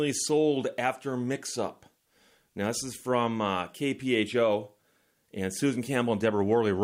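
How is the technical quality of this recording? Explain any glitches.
No technical faults can be heard at any point in the recording, and the signal remains steady and intact throughout.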